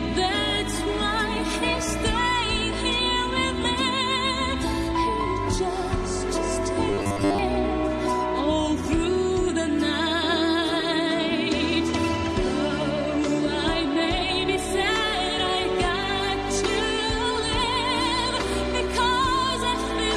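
From 6.91 to 7.39 s the sound turns into a rigid, metallic buzz at 100 Hz, a robotic sound from repeated short buffers. The likely cause is late-arriving audio being covered by replaying the last 10 ms block, so most of that stretch is repeats and the real audio is skipped.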